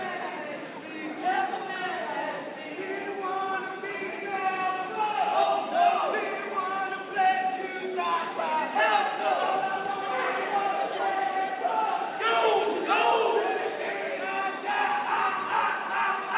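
No faults are audible anywhere in the clip.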